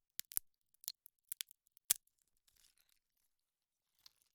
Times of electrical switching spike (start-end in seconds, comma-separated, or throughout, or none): 0.88